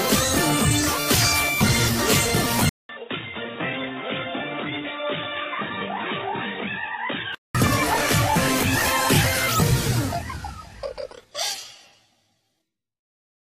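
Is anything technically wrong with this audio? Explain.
Yes. From 2.69 to 7.55 s the input was likely switched to a poorer device: after a 200 ms silence, nothing passes above 3.8 kHz, the level falls about 10 dB, and new noise sits about 30 dB below, sounding dull and boxy.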